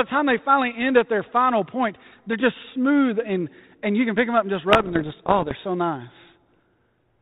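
From 4.7 to 5.53 s, just after "them up and just", the speech breaks into pops and rough, gritty bursts with brief jumps in level. These are bit errors on an ADPCM link, at a rate of somewhere under one percent. Each flipped bit throws off the decoder's step size and predictor, so the damage rings on for milliseconds instead of clicking once. Packet loss would leave gaps or smoothed-over fill. The G.726 coding, at 32 kbit/s and cut off above 4 kHz, keeps its light, steady character outside this stretch.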